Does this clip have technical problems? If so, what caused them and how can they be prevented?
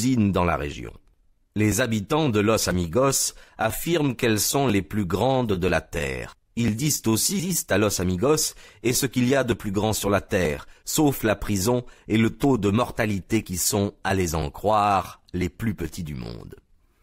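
Yes. At 7.39 s there is a skip ahead. Playback jumps forward with no gap, and about a second of audio is missing. The sound before and after the jump is joined almost directly. A late burst of audio likely overfilled the jitter buffer. The receiver threw away the oldest waiting audio to catch up, so the delay dropped by about a second at once. Prevention: size the jitter buffer for the network's real delay spread, and use gradual time compression instead of discarding whole stretches.

From 7.49 s to 10.08 s there is a jitter buffer speed-up. The audio runs at about 107 percent speed while the pitch stays the same, so this stretch sounds slightly hurried. The buffer was still holding more audio than its target. The receiver cut many short pieces, each one or a few pitch periods long, removing about a fifth of a second in total. Prevention: keep network delay steady so the buffer never overfills, and limit how fast it may compress.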